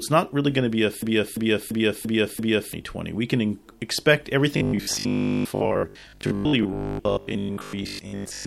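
A speech clip with two faults. From 1.02 to 2.73 s, right after "going to be a", a system hang loop replays one 341 ms slice five times at about 2.9 Hz, a machine-gun stutter. The repeating span fits a 16384-sample ring buffer, and roughly one and a half seconds of speech is lost. From 4.57 to 8.45 s, robotic sound from repeated short buffers imposes a rigid 50 Hz buzz while the voice still loosely tracks the words. This is likely caused by 20 ms buffers being replayed in place of most of the incoming audio.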